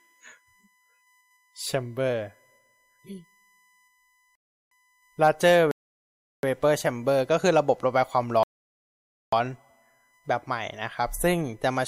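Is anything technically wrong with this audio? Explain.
Yes, two faults are audible in this speech clip.

USB whine runs through the whole recording: a steady tone at 1 kHz, strongest at its 2 kHz harmonic, sitting roughly 40 dB below the speech. The USB bus draws current in 1 ms frames, and that pulsing load leaks into the audio through shared power or ground. The result is a thin, fixed-pitch whine that doesn't follow the speech.

A rebuffering stall occurs three times: 4.35 to 4.71 s (0.36 s added), 5.71 to 6.43 s (0.72 s), and 8.43 to 9.33 s (0.89 s). Each time the player ran out of downloaded audio and halted until more arrived. The speech drops abruptly into silence, then picks up at exactly the point where it stopped. Nothing is missing, but the gaps break the timing of the speech.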